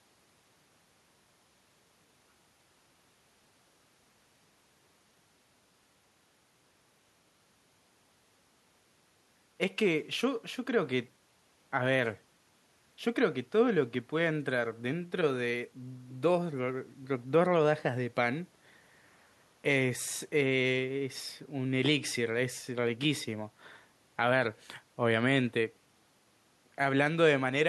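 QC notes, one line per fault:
No technical faults are audible anywhere in the speech signal.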